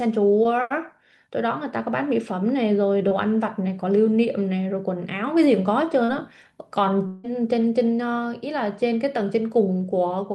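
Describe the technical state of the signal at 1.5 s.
At 1.5 s the speech is intact, with only the ordinary coding texture and high-frequency roll-off of the call codec path, which is consistent with a bandwidth of about 12 kHz.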